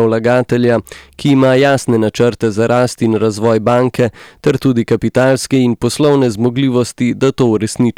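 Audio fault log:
throughout, hard clipping: peaks driven about 6 dB past the limit are cut flat, giving crackle on only the loudest syllables, sharper and brighter than the rounded warmth of soft saturation.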